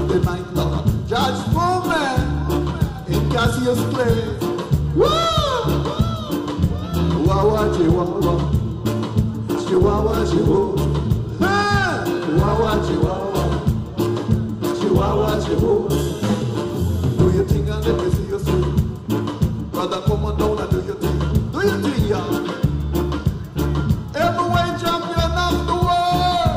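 Sample clock jitter runs through the whole clip. The converter's timing wanders by about a microsecond, so samples land slightly off time. The error follows the waveform's slope. A faint hiss, roughly 45 dB below the signal, thickens on loud, bright passages and disappears in silence.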